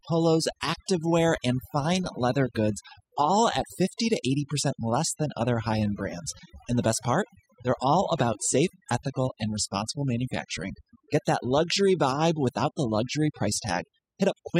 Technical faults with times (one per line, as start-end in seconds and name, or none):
0.00-14.60 overdone noise removal